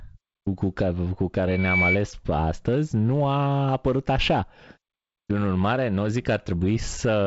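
Loudspeaker feedback squeal from 1.47 to 1.97 s cuts across the speech as a 2.3 kHz tone that swells over roughly 0.3 s to about 5 dB above the voice. A microphone is picking up its own loudspeaker, and the loop gain exceeds one at that frequency. The wideband telephone-style band limit, with nothing above about 7.7 kHz, is consistent with G.722 coding carrying the signal.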